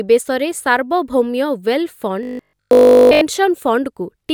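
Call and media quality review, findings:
Robotic sound from repeated short buffers, 2.23–3.21 s. Speech becomes a rigid metallic buzz at 50 Hz, repeating throughout. Likely cause: playout starvation looping a 20 ms buffer.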